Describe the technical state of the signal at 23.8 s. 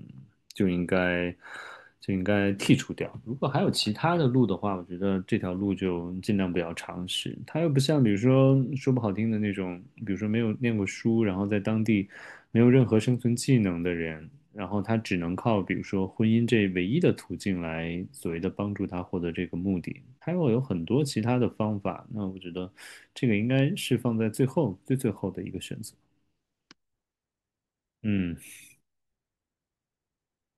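At 23.8 s the speech signal is intact, with no technical fault audible at that moment.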